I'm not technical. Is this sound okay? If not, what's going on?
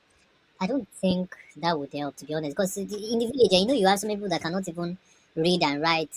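No. Wrong sample rate, throughout: the speech plays 1.45 times too fast and 6.45 semitones high, which fits 22 kHz audio played back at 32 kHz.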